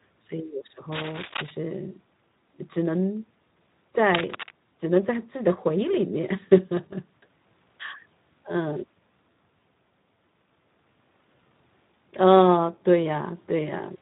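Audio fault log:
throughout Speex codec: a low-rate CELP coder, consistent with an 11 kbps setting, starves the excitation, leaving the speech plainly hoarse and noisy with nothing above 3.8 kHz.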